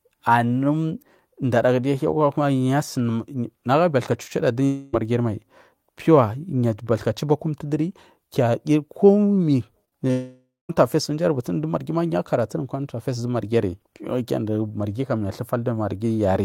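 At 4.65 to 4.95 s the sound is carried on by a synthetic continuation for nearly 0.3 s, a buzz or hiss that stands in for the audio instead of the real signal. This is most likely a long network dropout, with the receiver stretching the last sound across the gap. That lost part never returns. The signal picks up again further on.

From 9.85 to 9.93 s there are two back-to-back short concealed packet losses, and another at 10.07 to 10.11 s. In each, a few hundredths of a second failed to reach the decoder, and the gap was patched by extending the preceding sound before blending back. They come across as brief smears or a small wobble. What sets them apart from a dropout is that they heal almost at once, with no fade toward silence.

Straight after, from 10.11 to 10.71 s, a second likely long network dropout lasts about 0.6 s. The continuation fades out, leaving roughly 0.19 s of silence before the audio resumes with that stretch gone.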